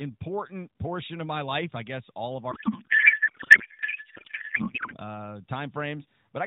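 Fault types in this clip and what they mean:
Codec payload misread: from 2.52 to 4.96 s the speech turns into garbled noise and warble that barely tracks it, because AMR frames packed octet-aligned are being unpacked as bandwidth-efficient. The decoder reads plausible frames with every field shifted, until the packing matches again.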